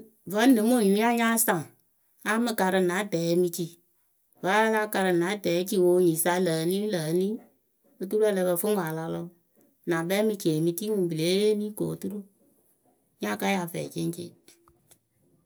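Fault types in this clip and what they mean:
No faults are audible.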